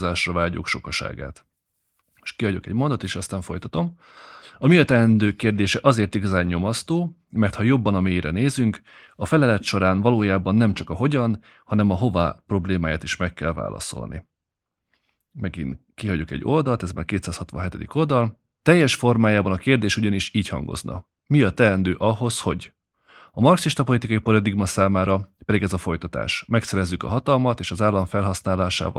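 No technical faults can be heard anywhere in the speech recording: the signal runs without interruption throughout.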